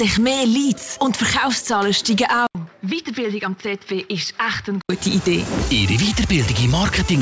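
From 2.47 to 4.89 s, likely an input switched to a poorer device: an 80 ms waveform gap, then quieter, dull sound, spectrogram empty above 5.9 kHz.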